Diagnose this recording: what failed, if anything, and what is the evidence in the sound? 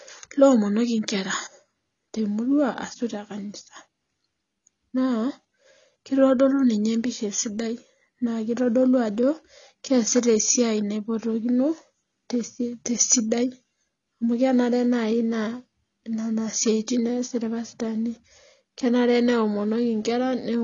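AAC compression, present from start to finish, sits at the codec stage. The speech is dull and smeared, with a warbling, fizzy edge on sibilants and sustained sounds, and nothing at all comes through above 6.9 kHz. That hard ceiling and the plainly audible damage point to an AAC-LC encode at a low bitrate, which fits roughly 24 kbps. The likely cause is that the encoder, starved of bits, lowered its cut-off and quantised the remaining bands coarsely.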